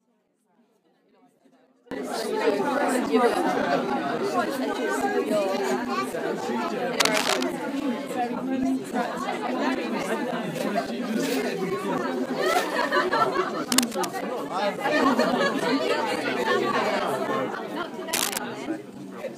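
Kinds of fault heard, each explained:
One channel inverted: From 0.00 to 1.91 s the sound drops by about 32 dB and turns faint. This fits the likely cause of one stereo channel having reversed polarity. When the channels are summed to mono, everything common to both cancels, so centred content largely disappears. Only the small difference between left and right remains, until the full level returns after 1.91 s.
Cable scratch noise: Short bursts of scratchy, crackling rustle cover the sound from 6.98 to 7.44 s, 13.72 to 14.05 s and 18.13 to 18.38 s. Each burst is roughly as loud as the sound itself. The likely cause is a worn cable, connector or control being moved. Its contact resistance jumps rapidly and irregularly, which adds dense, uneven noise for as long as the movement lasts.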